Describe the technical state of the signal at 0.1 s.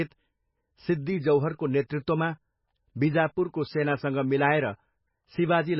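MP3 compression, likely the cause, runs throughout, including at 0.1 s: a very low bitrate of roughly 16 kbps leaves nothing above 5.6 kHz, making the speech dull and watery.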